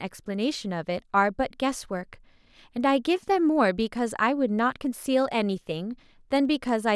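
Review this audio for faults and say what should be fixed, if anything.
Nothing here needs fixing; no faults are audible.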